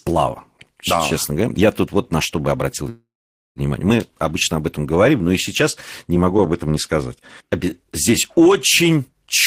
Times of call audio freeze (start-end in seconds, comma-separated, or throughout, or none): 2.89-3.59